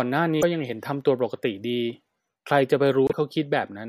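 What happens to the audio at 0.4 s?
At 0.41 to 0.43 s the speech skips ahead and a brief garbled disturbance of about 28 ms replaces it. The likely cause is a broken MP3 bit reservoir. Frames appear to have been dropped, so the next frame looks back into the reservoir for borrowed data and decodes bytes belonging to another frame. The disturbance spans roughly one 26.1 ms frame, a single mangled frame before the decoder recovers.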